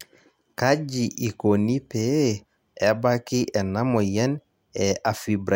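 No technical faults are audible.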